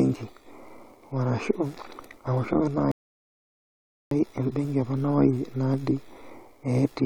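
A rebuffering stall runs from 2.91 s to 4.11 s. The player used up the audio it had downloaded and had to wait for more, so the speech drops into flat silence for about 1.2 s. When playback restarts on "embenki ekuna", it picks up exactly where it stopped, with nothing skipped or repeated. The stall only adds that extra stretch of dead air to the clip's timeline.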